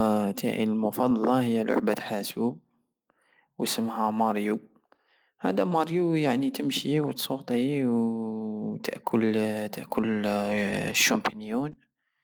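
Clock drift between sender and receiver runs through the whole speech clip. The sender's clock runs about 2% slow, so the receiver's jitter buffer keeps draining faster than it refills, and playback has to be stretched to keep going without gaps.

Repeated timing corrections follow from this, from 0.15 s to 11.89 s. The receiver keeps repeating short pieces, adding about a fifth of a second overall and playing at 98% speed. The edits are unevenly spaced, heard as faint hiccups and a slightly dragging, unsteady tempo.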